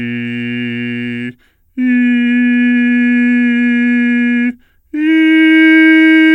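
Audio recorded at one sample rate is being played back at a lower one with no rate conversion, a wrong sample rate fault that runs through the whole music clip. Speed and pitch drop together: everything plays at 0.919 times its proper speed and sits 1.47 semitones flat, so the music sounds slightly sluggish and darker in key. That ratio fits 48 kHz material being played at 44.1 kHz.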